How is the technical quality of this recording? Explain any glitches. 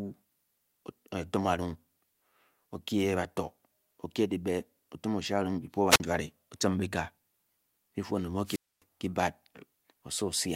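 The speech is interrupted twice by wireless microphone squelch dropouts, at 5.89 to 6.00 s and 8.44 to 8.83 s. As the radio link fades, hiss rises, then the receiver's squelch mutes the output, leaving near-silent holes of about 44 ms and 259 ms before the signal returns.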